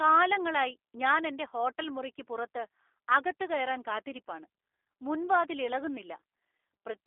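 Speech carried through a G.729 codec for the whole clip, bandlimited to roughly 300 Hz to 3.5 kHz. Unlike simple telephone filtering, the voice sounds rough and slightly synthetic, rebuilt from filter and pulse parameters, which fits an 8 kbit/s G.729A stream.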